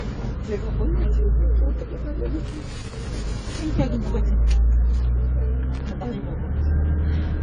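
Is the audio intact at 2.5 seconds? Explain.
No. From 2.46 to 2.97 s an irregular burst of crackle and scratching tears through the sound. This is loose connector crackle: a worn or dirty contact briefly losing and regaining contact, chopping the signal on and off many times in half a second, while any DC on the line turns each break into an audible pop.

Underneath this, across the whole recording, the audio sounds dull and smeared, with nothing above 10 kHz and a fizzy, warbling texture on sustained sounds and hiss-like detail. The likely cause is heavy AAC compression at a low bitrate, which fits something around 24 kbps. To save data, the encoder lowered its cut-off and quantised the remaining frequency bands so coarsely that the damage became plainly audible.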